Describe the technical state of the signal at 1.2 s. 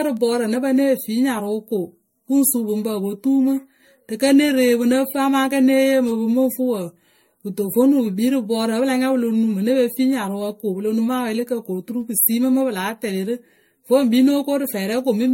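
At 1.2 s you're hearing generation loss, and it runs through the whole speech clip. Everything above 16.7 kHz is gone, and the sound is swirly, hollow and smeared, with soft, blurred attacks. The likely cause is the audio being run through MP3 around seven times, at rates that point to roughly 63 kbit/s. Each re-encode quantised on a shifted frame grid, so noise and spectral holes piled up.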